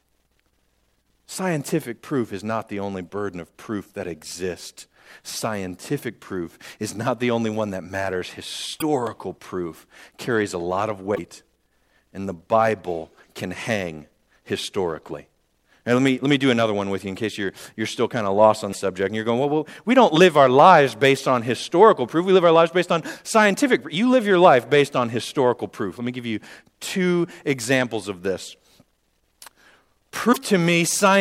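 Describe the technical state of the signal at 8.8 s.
Right after "only one that matters", from 8.77 to 8.82 s, there's damaged data in the compressed stream; the decoder loses sync and spits out a brief chirp, squawk, click or short hole before "proof carries a lot".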